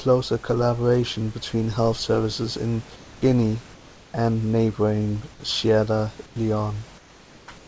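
At 6.26–6.36 s, 6.98–7.48 s and 7.58–7.68 s, the room background turns into a flat, featureless hiss about 2 to 3 dB quieter. This is comfort noise in place of the background, likely from discontinuous transmission filling pauses in the speech.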